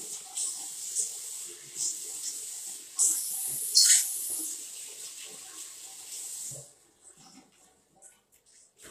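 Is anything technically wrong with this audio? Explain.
Yes. HE-AAC compression is likely behind a plainly audible treble fault that runs through the whole clip. The upper frequencies sound bright but synthetic: gritty, metallic and lispy on any sharp or hissy content. That points to spectral band replication. The codec keeps only the lower spectrum and fills the top by copying lower bands upward under a coarse envelope, so the treble's harmonics no longer match those below the crossover. The degree of damage suggests a low bitrate, around 24 kbps.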